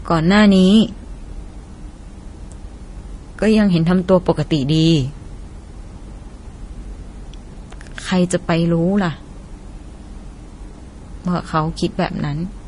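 From start to finish the speech sounds dull, with nothing above 10.6 kHz. Two layers of coding damage are audible together. The likely cause is transcoding between lossy codecs. The pattern fits an MP3 near 40 kbit/s re-encoded to Vorbis near 31 kbit/s, with the second encoder spending its scarce bits on the first one's artefacts while keeping the lower cut-off.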